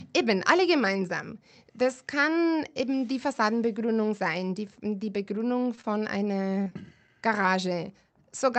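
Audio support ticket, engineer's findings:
Short concealed packet loss at 5.75 to 5.79 s. Brief smear in the speech. About 20 ms never reached the decoder. Receiver extended the preceding sound to cover it, then crossfaded back. Jitter buffer concealment.

Short concealed packet loss again at 6.64 to 6.68 s and 6.70 to 6.73 s. Two close wobbles. Each loses about 20 ms.

Short stall from a late packet at 5.81 to 5.86 s, just after the first loss. Sound held about 26 ms too long, with a slight buzz or dip. Packet arrived late and the jitter buffer ran dry. Receiver stretched the last sound, then resumed from the same point. Nothing lost, but timing slips by about 26 ms.

Call path audible as Opus coding at 48 kbps with top end cut at 8 kHz.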